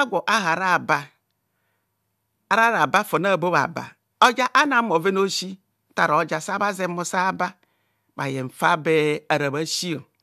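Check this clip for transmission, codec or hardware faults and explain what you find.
I find no faults to report in this clip.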